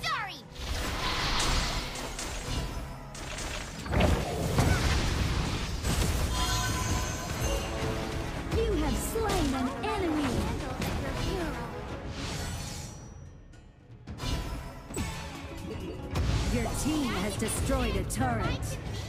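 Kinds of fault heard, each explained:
Nothing stands out here: the audio holds steady all the way, with no dropouts, glitches or distortion to point to.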